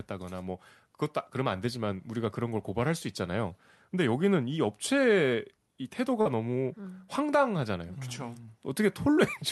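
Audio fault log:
6.21–6.27 s, short concealed packet loss: a brief smear in the speech, the sound stretched for an instant before easing back. About 40 ms of audio missed the decoder, so the receiver extended the preceding sound across the gap, then blended back in.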